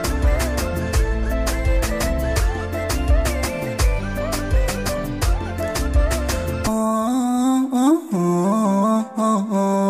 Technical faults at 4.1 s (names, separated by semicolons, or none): none